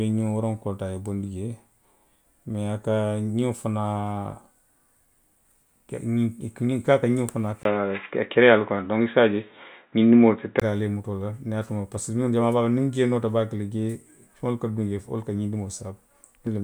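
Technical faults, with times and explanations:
7.63 to 10.62 s, input switched to a poorer device: a 20 ms gap, then dull speech with nothing above 3.8 kHz and about 5 dB level change, likely from a narrowband microphone.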